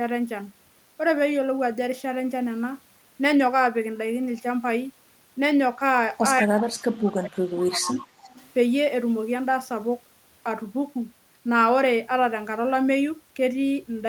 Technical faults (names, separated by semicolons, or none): speech suppressed in double talk; echo leak